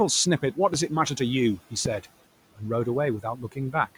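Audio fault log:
0.74–0.76 s and 1.85–1.88 s, loud pop: two sharp pops, about 15 dB and then about 10 dB above the speech, with the talking carrying on underneath. Likely a quick voltage spike from a plug, switch or static getting into the chain, briefly shaped by the circuits after it.
3.23–3.74 s, speech cut by the noise suppressor: the suppressor mistook bits of speech for noise and turned them down with the background, about 14 dB at the deepest, totalling roughly 150 ms. Those soft bits sound swallowed or faint against the room noise, which sits about 21 dB under the speech.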